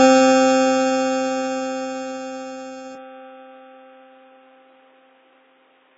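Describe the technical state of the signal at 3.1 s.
At 3.1 s the music has just passed an input switched to a poorer device, likely the cause, at 2.95 s and lasting to the end. The band narrows to nothing above 3.8 kHz, sounding boxy, with a faint new noise floor and no gap or level jump. On a spectrogram the top edge drops sharply there.

Beneath that sits heavy AAC compression throughout, likely at a rate near 16 kbps, cutting everything above 7.7 kHz and leaving a smeared, warbling texture. A spectrogram shows the flat ceiling.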